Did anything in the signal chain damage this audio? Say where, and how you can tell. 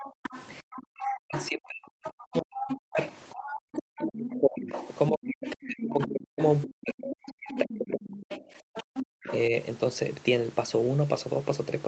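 Yes. The damage sits in the call processing, at the echo canceller. A second voice is audible under the talker from 0.0 to 4.91 s at about 10 dB below the speech. It returns from 5.48 to 9.36 s at about 15 dB down. This is the other side's voice leaking through. The likely cause is loudspeaker playback reaching the microphone, with the canceller failing to subtract all of it.

Two brief holes appear in the room sound. The first runs from 0.12 to 0.23 s, about 100 ms. The second runs from 9.06 to 9.21 s, about 150 ms. Each falls by about 40 dB, then the ambience snaps back. That is background gated by the echo canceller. It clamped the microphone hard while far-end audio played, then released.

From 0.61 to 8.51 s the talker's own voice keeps dipping and breaking up. The drops reach roughly 40 dB and add up to about seven seconds. This is speech suppressed in double talk. Both sides were talking at once. 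The canceller likely could not tell near speech from echo, so it attenuated everything together.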